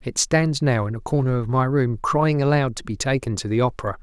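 No technical fault can be heard anywhere in the speech.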